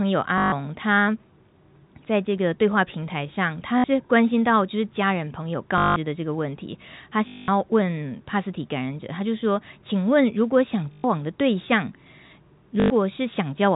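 Packet loss with last packet repeated occurs at 0.38, 3.78, 5.78, 7.28, 10.92 and 12.80 s, lasting 60 to 200 ms. Each gap is refilled by looping the last packet, causing a robotic 50 Hz buzz that fits 20 ms packets, heard over G.711 telephone-band speech.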